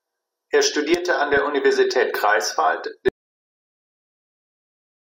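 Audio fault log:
1.32–1.37 s, DAB burbling: just after "studierte an", bit errors of a fraction of a percent slip past error correction, putting short blips of noise into single sub-bands.
3.09 s to end, audio dropout to silence: the speech cuts off into silence with no room tone, likely from lost input while the recorder kept writing silence.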